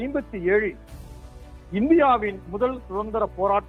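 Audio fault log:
No fault is heard anywhere in the audio.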